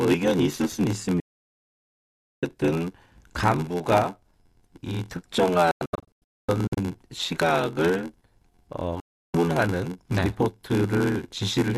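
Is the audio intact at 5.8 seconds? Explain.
No. From 5.71 to 6.78 s the speech breaks into several short silent holes, each cut in with a fade of about 3 ms. About 648 ms of sound vanishes across that stretch, and the longest gap is 240 ms. This is a digital broadcast dropout: the receiver lost the signal or rejected corrupted frames and muted until clean data returned, so what was sent then is gone.

Around that moment the speech also carries a steady 86.1 Hz buzz and runs slowed to 0.861 of normal speed, at about its usual pitch. That is a block size mismatch (padded). Each block from one stage arrives short of what the next reads, which fits a 512-sample read size, and the remainder is zero-filled, putting a tiny gap in every block.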